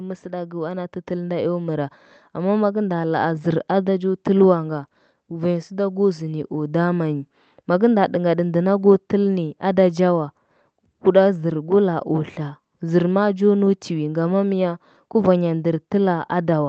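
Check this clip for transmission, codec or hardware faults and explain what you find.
One fault stands out, near the start of the speech.

From 0.22 to 2.01 s there is automatic gain rising. The gain control judged the input too quiet and pushed its gain up by about 8 dB. It did this gradually. Voice and background swell together across those 1.8 seconds, over the call path's Opus coding, whose top end stops near 8 kHz.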